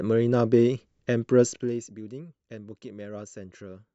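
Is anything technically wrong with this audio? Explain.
Yes. From 1.44 to 1.88 s the speech carries zipper noise: the level drops by roughly 15 dB in 1 dB steps, about forty per second, with no smoothing between them. Each step produces a small click, so the fade sounds ticked or zipped instead of continuous.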